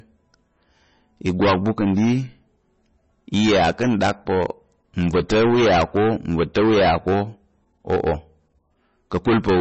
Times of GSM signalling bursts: none

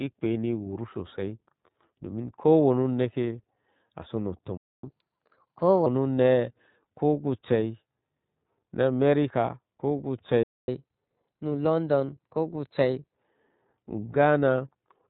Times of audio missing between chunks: none

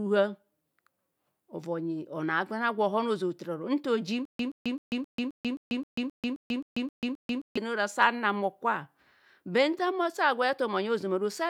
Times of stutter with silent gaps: 4.25-7.57

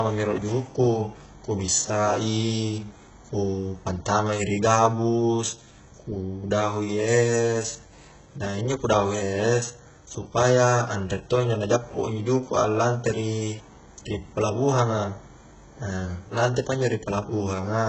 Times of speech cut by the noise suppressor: none

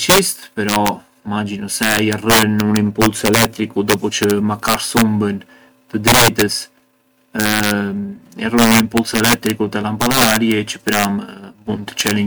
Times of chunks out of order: none

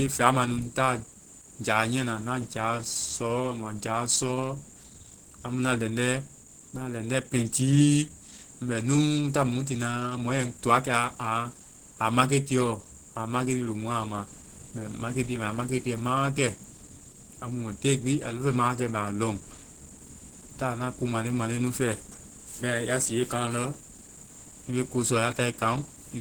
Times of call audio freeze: none

